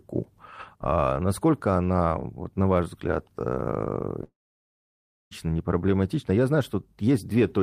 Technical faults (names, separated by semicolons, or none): long network dropout